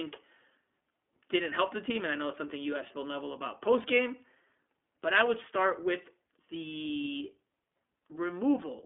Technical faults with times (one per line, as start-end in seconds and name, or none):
0.00-8.86 iLBC codec